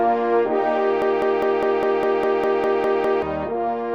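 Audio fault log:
1.02 to 3.22 s, broken-record loop. A fragment about 0.2 s long plays 11 times in a row, each repeat identical and joined end to end. The stutter has a steady rhythm of roughly five repeats per second. Whatever should have played in those two seconds never arrives. The likely cause is a player, encoder or stream that stalled and kept re-sending the last piece it held in its buffer until it recovered.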